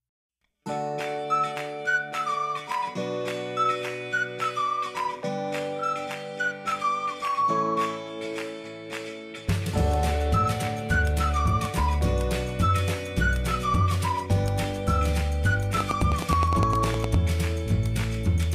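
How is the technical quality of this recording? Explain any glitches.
The recording has one clear glitch near the end. From 15.81 to 17.15 s there is a train of clicks: around fifteen evenly spaced pops at about 9.7 per second, peaking roughly 15 dB above the signal. The likely cause is electrical interference or a faulty connection or power supply injecting repeated pulses. It sounds like steady ticking over the audio. A waveform shows thin spikes at regular intervals, and a spectrogram shows matching full-height vertical lines.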